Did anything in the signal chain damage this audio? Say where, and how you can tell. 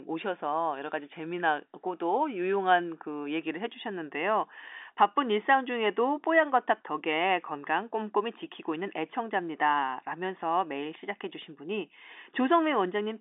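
No, nothing in the signal chain stood out as damaging on listening; the speech carries the narrow band of an ordinary G.711 telephone line, with nothing heard above about 3.8 kHz.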